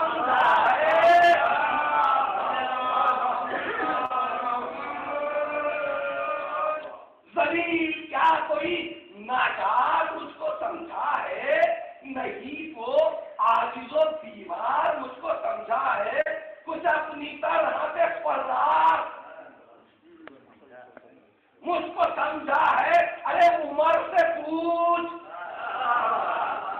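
Short concealed packet loss occurs at 4.05 to 4.12 s, 5.24 to 5.27 s and 16.21 to 16.28 s. About 40, 20 and 40 ms of audio arrived too late, and the decoder filled each gap by extrapolating the preceding sound before crossfading back. Each is heard as a brief smear or wobble.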